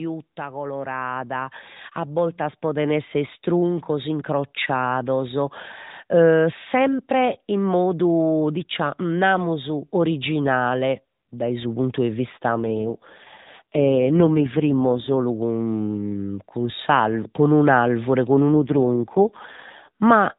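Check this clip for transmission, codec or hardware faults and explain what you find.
Three faults are audible in this speech clip: a gain ramp at the start and two codec rate drops later on.

Automatic gain rising, 0.36 to 5.5 s, before "e sempre in modu": the gain control judges the input too quiet and lifts it by about 13 dB, so voice and background swell together.

AMR rate drop, 12.62 to 15.16 s (after "su puntu 'e vista") and 18.54 to 19.89 s: the link forces the AMR narrowband codec down from its normal mode, whose light 4 kHz-limited character fits 12.2 kbps, to one that fits 4.75 kbps. The voice turns rough and synthetic with no gap or band change.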